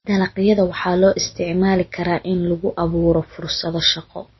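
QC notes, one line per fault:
Throughout: MP3 compression, likely. Nothing is heard above 5.8 kHz, so the speech sounds dull and muffled. Weak frequency detail drops in and out between frames, giving a plainly audible watery, swirly texture. This fits a low bitrate near 25 kbps.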